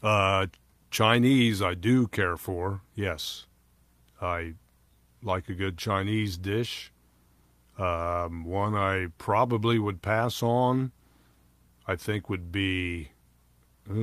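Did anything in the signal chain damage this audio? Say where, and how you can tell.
No, nothing in the signal chain damaged this audio.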